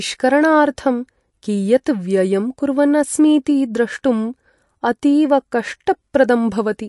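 Throughout the speech, the treble stops dead at 11.2 kHz, and sibilants turn swirly and metallic as faint detail flickers in and out, which is likely MP3 compression at a low bitrate near 48 kbps. A spectrogram shows a flat ceiling with patchy, blocky gaps beneath it.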